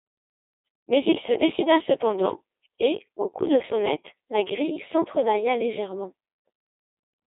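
From start to end, the speech passes through a Codec 2 vocoder. The waveform is discarded. Only pitch, voicing, energy and a rough spectral envelope survive, and sine waves rebuild the voice. It sounds heavily robotic and buzzy. Nothing exists above 3.8 kHz, which fits a 2.4 kbit/s mode.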